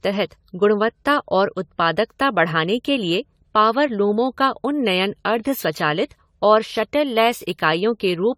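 From start to finish the speech sounds swirly and hollow, with a smeared, watery texture and blurred consonant attacks, and nothing is left above about 19.9 kHz. The character points to AAC-LC coding at around 64 kbit/s, but the damage is heavier than that rate alone would give. The likely cause is generation loss: the audio was decoded and re-encoded roughly seven times, each pass adding fresh quantisation noise and spectral holes.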